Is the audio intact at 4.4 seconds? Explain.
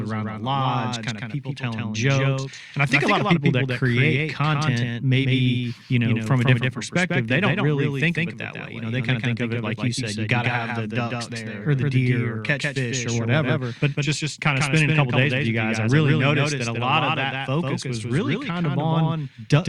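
No, at 4.4 seconds the speech is a doubled audio track, likely from a second, slower capture path, so a copy trails about 150 ms behind, roughly 5 dB quieter, throughout.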